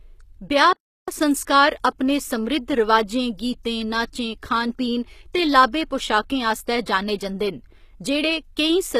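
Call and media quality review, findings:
Throughout: gritty, metallic sibilants, plainly audible codec damage, nothing above 14.9 kHz. Likely HE-AAC compression, consistent with about 20 kbps; treble rebuilt from copied lower bands. Spectrogram: repeated-looking upper band, hard ceiling at 14.9 kHz.

0.73–1.08 s: sound cuts out mid-flow for 347 ms, then resumes. Playback stall, likely with the player starved of data or its thread blocked, output silent until recovery. Waveform: flat gap of 347 ms between continuous sections.

7.18–7.20 s: short hiss about 20 ms ahead of a sharp attack, onset smeared. Pre-echo: a transform codec spread quantisation noise across the block, filling the quiet before the transient. Spectrogram: broadband smear preceding the onset edge.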